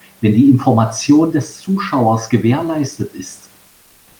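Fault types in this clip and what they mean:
Comfort noise in place of the background: from 3.67 s to the end of the clip, about half a second, the room noise beneath the speech, which sits about 36 dB below it, gives way to a smooth, featureless hiss about 2 dB quieter, lacking the texture of the real room. This is likely discontinuous transmission such as Opus DTX: the sender stops sending during the pause, and the receiver fills the gap with synthetic noise shaped roughly like the background.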